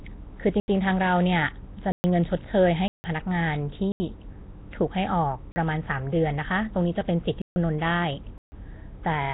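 Nellymoser compression, throughout: the speech carries a rough, hissy halo and a smeared, underwater character, with nothing above 3.9 kHz. This is likely the Nellymoser Asao codec, and the heavy damage fits a rate of about 16 kbps. Each short block of samples gets a fixed, small bit budget, so weaker frequency bands receive no bits and are filled with noise instead of the real signal. That substitution produces the hiss and blur.

Blocks of digital silence at 0.60–0.68 s (80 ms), 1.92–2.04 s (120 ms), 2.88–3.04 s (160 ms), 3.92–4.00 s (80 ms), 5.52–5.56 s (40 ms), 7.42–7.56 s (144 ms) and 8.38–8.52 s (141 ms): runs of samples drop to silence, as when output buffers go unfilled in time. The sound cuts out and returns with no fade. The 40 ms gap sounds like a short hole. The longer ones sound like abrupt dropouts.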